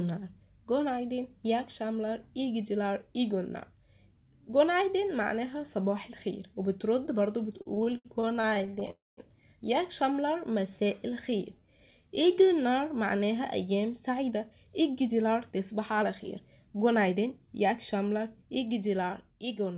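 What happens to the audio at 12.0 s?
At 12.0 s you're inside a jitter buffer slow-down running from about 10.13 to 12.47 s. The receiver's buffer ran low or had just raised its target delay, so it stretched the audio by repeating single pitch periods, playing at about 90% speed and adding roughly 0.25 s. Pitch stays put, but sounds drag out.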